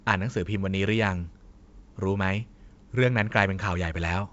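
No technical faults can be heard in the speech. It comes through G.722 wideband telephone coding at 64 kbit/s, with nothing above 7.7 kHz and at most a faint trace of the codec's coding.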